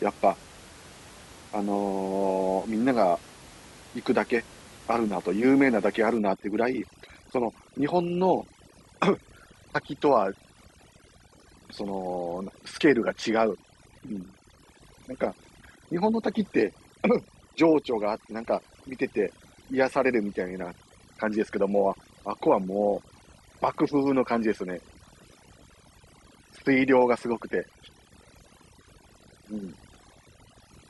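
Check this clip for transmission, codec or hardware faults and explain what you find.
One fault is present: overdone noise removal, from 6.18 s to the end of the clip. A noise reducer set far too strong switches off bands near its noise estimate, taking quiet speech detail too. The room noise, about 23 dB below the speech, becomes near silence with twinkling specks. A spectrogram shows a blacked-out background dotted with isolated bright specks.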